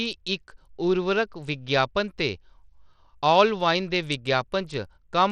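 Bluetooth SBC compression runs throughout this speech, its coarse, gritty, dulled treble likely from a starved bit pool, consistent with roughly 80 kbps, leaving upper sub-bands flickering.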